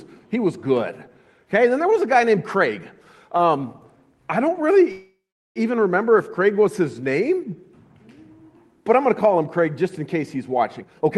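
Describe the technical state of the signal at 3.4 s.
A packet arrived late and the jitter buffer ran dry, causing a short stall from a late packet at 3.37 to 3.41 s: the sound is held for about 17 ms, with nothing lost.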